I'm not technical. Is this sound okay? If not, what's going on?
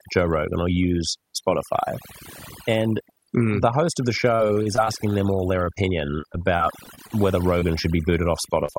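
No. Several things went wrong, both in cleanup and in the connection carrying the speech.

Overdone noise removal runs through the whole clip. A tool meant to strip out background hiss was set too aggressively, so it shuts off any slice of sound that resembles the noise, including quieter parts of the voice. The background drops and breaks up into twinkling, warbling specks.

Repeated packet loss (robotic sound) happens from 4.21 to 5.16 s and again from 6.21 to 7.12 s. The connection kept dropping small chunks of the speech, nine times in the first stretch and seven in the second, each gap at most a few hundredths of a second long. Each time, the receiver covered the hole by extending the last bit of sound. Those patches fill about a fifth and then about a seventh of these stretches, so the voice turns choppy, with pieces missing.

A short stall from a late packet occurs from 5.64 to 5.69 s. 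One chunk arrived late, and the receiver held the previous sound for about 23 ms while waiting for it. Nothing is lost, but the sound hangs a moment too long, with a slight buzz or dip.

Short concealed packet loss appears at 5.75 to 5.91 s, 7.60 to 7.64 s, 8.66 to 8.70 s and 8.72 to 8.76 s. Each time, about 20 ms of speech never arrived and was patched over by guessing from the sound just before. You hear a brief smear or wobble, and a quick sound can vanish.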